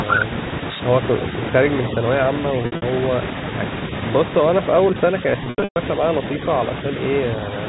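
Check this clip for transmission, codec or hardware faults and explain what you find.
Two transmission faults appear against a band-limited telephone-style background.

Packet loss with pitch repetition, 2.62–2.82 s and 5.44–5.76 s: lost packets are bridged by repeating the last pitch period, heard as buzzy held sound; the 120 ms gap fades briefly to silence.

Speech suppressed in double talk, 4.90–4.96 s and 5.22–5.27 s: the level dips by about 5 dB in short patches, likely an echo canceller ducking the talker during overlapping speech.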